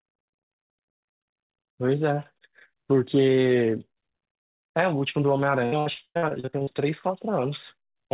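From 5.66 to 6.77 s, the speech breaks up with repeated packet loss, giving a robotic sound. More than a dozen short holes follow one another, the longest about 98 ms. Each hole is patched by stretching the last bit of sound forward. Roughly half of the span ends up concealed. The speech turns choppy, with pieces missing. All of it sits within a band that stops at 4 kHz, which fits a G.711 call codec.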